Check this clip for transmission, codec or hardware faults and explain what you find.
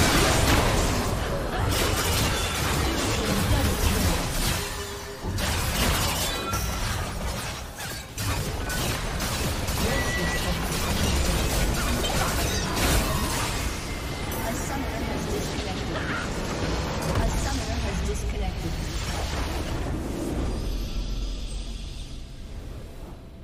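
One codec fault is present: a corrupt frame concealed, from 21.19 to 21.21 s. Bit errors damaged a compressed AAC frame. The decoder detected the damage and replaced that stretch itself, either muting it or filling it with a sign-scrambled copy of the previous good spectrum. The concealed stretch is brief, about 24 ms, which fits a single lost frame.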